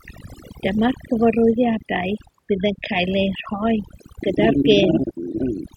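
From the first second to the last, the speech carries overdone noise removal. The noise suppressor was set far too aggressively, so it pulls individual frequency bands down to nothing whenever their level sits close to what it takes as the noise floor, and the softer components of the speech are cut along with the noise. Between phrases the background collapses to near silence dotted with chirping, glittery artefacts.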